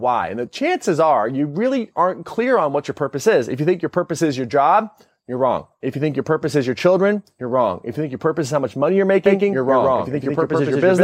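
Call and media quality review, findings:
Doubled audio track from 9.26 s, right after "how much money you're", to end of clip. Speech gains a second full-band copy about 150 ms behind, at roughly equal level. Copy starts abruptly. No decay or room colour on it. Likely cause: a slower second capture path mixed in, or an edit holding two copies out of step.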